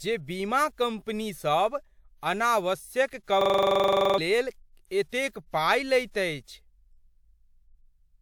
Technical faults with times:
3.23-3.27 pre-echo
3.41-4.18 system hang loop

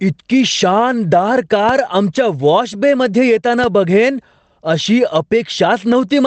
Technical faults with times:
0.00-6.27 gain pumping

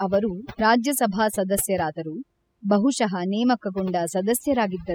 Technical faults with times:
0.00-4.94 overdone noise removal

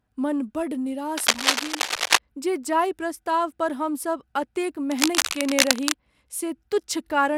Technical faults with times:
1.17-2.18 cable scratch noise
4.87-5.94 cable scratch noise

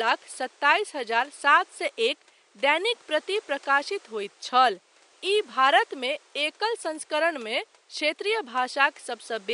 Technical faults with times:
none

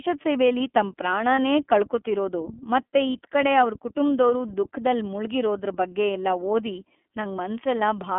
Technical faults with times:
0.00-8.18 iLBC codec
1.35-1.39 lost iLBC frames
3.13-3.16 lost iLBC frames

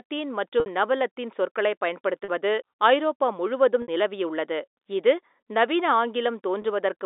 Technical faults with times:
0.60-0.66 packet loss with pitch repetition
2.24-2.28 packet loss with pitch repetition
3.82-3.88 packet loss with pitch repetition
6.62-6.64 packet loss with pitch repetition

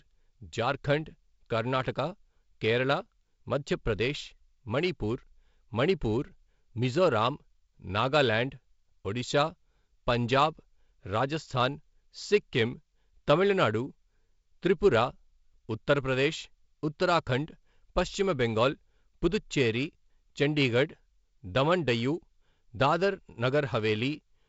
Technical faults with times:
none

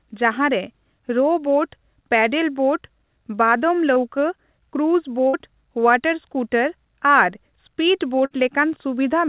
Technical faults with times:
3.94-3.98 short concealed packet loss
5.28-5.35 burst of packet loss
8.25-8.32 burst of packet loss

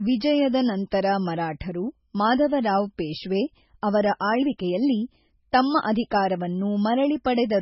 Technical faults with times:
0.00-7.62 MP3 compression

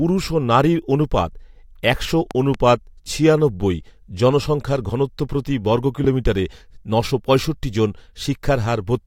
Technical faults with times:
2.31-2.57 loud pop
6.04-6.07 loud pop

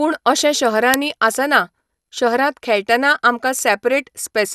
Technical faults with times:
0.00-4.55 generation loss
0.94 uninitialised buffer

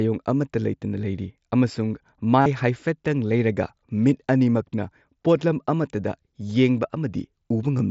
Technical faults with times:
2.41-2.46 concealed Bluetooth headset packet loss

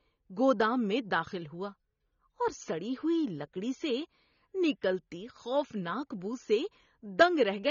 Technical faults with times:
0.00-7.71 AAC compression

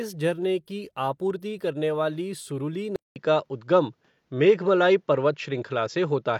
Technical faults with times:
2.96-6.39 input switched to a poorer device

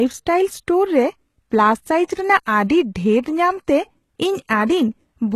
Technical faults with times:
0.00-5.36 HE-AAC compression

